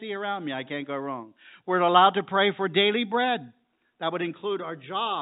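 Telephone-coded speech with no audible technical faults.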